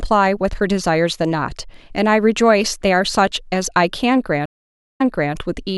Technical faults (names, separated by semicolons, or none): stream reconnect